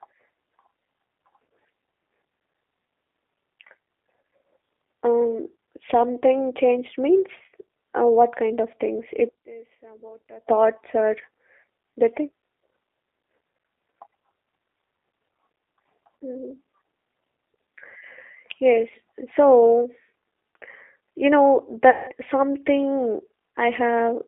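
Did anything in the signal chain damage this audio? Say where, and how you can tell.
Yes, two stages did. At the codec, the whole clip carries G.729 damage, clearly audible. The band runs from about 300 Hz to 3.6 kHz, and the speech has that slightly rough, synthetic edge you get when it's rebuilt from a vocal tract filter, a pitch predictor and a few pulses per subframe rather than sent as a waveform. That character points to G.729A at 8 kbit/s.

Then there's a network hit, VoIP packet loss concealed by the speech codec, from 21.90 to 22.11 s. About 180 ms went missing, which fits nine 20 ms packets. The decoder kept extrapolating its last pitch and filter state with falling gain, so the speech smears into a fading buzzy tone or coloured noise. Since every frame leans on the previous one, the speech stays weak and distorted for a bit after packets resume.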